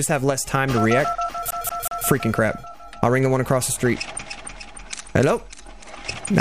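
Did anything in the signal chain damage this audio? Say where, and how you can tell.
Yes. From 1.51 to 2.06 s, a 185 ms slice of audio repeats three times with a brief mute at each jump, the rapid, even stutter of a CD stuck on one turn. This is a playback fault: a scratch keeps throwing the laser back one track.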